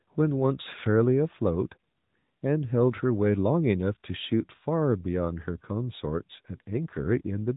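It's a speech clip, and the whole thing has gone through an AMR narrowband mobile codec, the old 2G/3G phone-call sound. There's simply nothing above about 3.8 kHz, so it's dull and boxy, and the codec damage is plainly audible: the voice comes out buzzy and a bit synthetic because it's being rebuilt from a vocal-tract model fed with sparse pulses. The amount of grit fits a mid-rate mode around 10 kbps.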